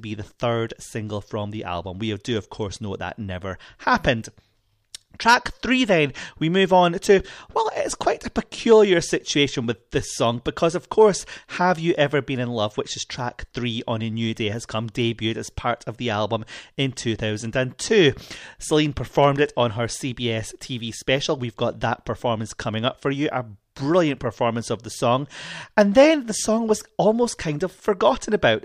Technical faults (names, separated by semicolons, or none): hard clipping